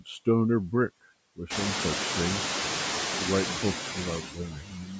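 Noise suppressor artifacts run through the whole clip. The suppressor is estimating the steady background band by band and pulling it down, but only by about 1 dB. That is too little to clear the room noise. The noise rises sharply, by about 17 dB near 1.5 s, and settles only about 6 dB under the speech.

From 4.22 s to the end of the clip, the noise suppressor cuts speech. Its gain drops by up to about 12 dB over roughly 0.7 s, because the suppressor takes part of the speech for background and turns it down along with the noise. The ending sounds swallowed and faint. The call microphone processing works normally, with nothing above 8 kHz.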